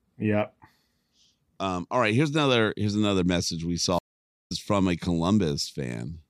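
A speech recording with a stream reconnect: after "here's another message we" the audio drops out at 3.99 s and stays silent for about 0.49 s. At 4.52 s it resumes with "from a," roughly 0.4 s further along the stream, so a short stretch of speech is missing, not just delayed. The connection broke, and the player restarted its decoder mid-stream. On a waveform this shows as a flat-line gap; on a spectrogram it is a clean blank vertical band.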